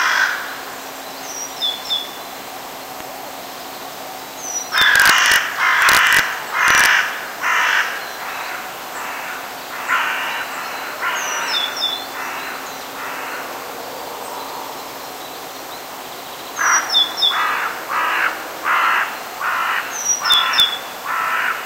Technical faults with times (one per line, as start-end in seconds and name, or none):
3.00-3.02 loud pop
4.78-5.36 integer overflow
5.82-6.19 integer overflow
6.68-6.86 integer overflow
20.32-20.60 integer overflow